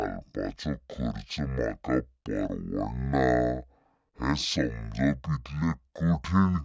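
Speech played at the wrong sample rate throughout, running at half speed and an octave low, which fits 32 kHz audio played back at 16 kHz. Unlike time-stretching or pitch-shifting alone, tempo and pitch drop together by the same ratio.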